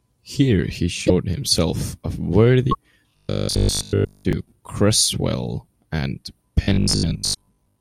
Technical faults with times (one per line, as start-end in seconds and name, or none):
1.06-1.10 broken MP3 bit reservoir
2.71-2.75 broken MP3 bit reservoir
3.11-4.33 robotic sound from repeated short buffers
6.63-7.80 robotic sound from repeated short buffers
7.33-7.36 broken MP3 bit reservoir